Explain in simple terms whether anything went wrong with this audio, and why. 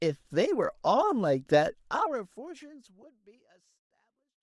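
Nothing went wrong with this audio; the gentle fade-out from around 2 seconds onward is a normal editing touch, not a problem.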